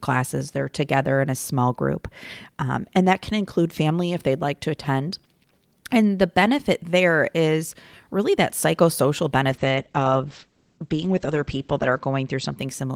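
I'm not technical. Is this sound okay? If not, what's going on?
No. Call bitrate drop, 9.5 to 12.63 s, after "is really that psychosocial": the connection weakened, so the voice was sent with far less detail, dulling the treble and roughening the sound.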